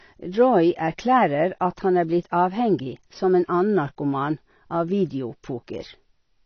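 Heavy AAC compression, likely AAC-LC at a low bitrate, runs through the whole speech recording, and the damage is plainly audible. The encoder has discarded everything above 6.6 kHz, so the top of the spectrum is simply missing and the sound comes across dull and muffled. With so few bits per frame, what remains is coarsely quantised, leaving a smeared, warbling texture on sustained sounds and fizzy, uneven sibilants. The overall character fits a rate of around 24 kbps.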